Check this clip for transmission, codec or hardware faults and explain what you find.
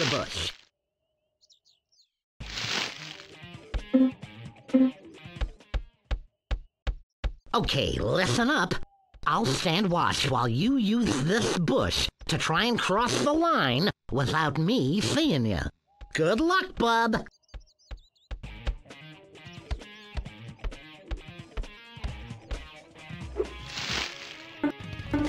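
No transmission, codec or hardware faults can be heard anywhere in the audio, which stays intact throughout.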